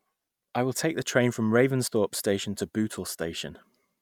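At 1.84 to 1.88 s, right after "take the train from", there is a brief glitch of damaged data in the compressed stream. Corrupted bytes made the decoder misread the frames there and lose sync while it searched for the next valid frame header.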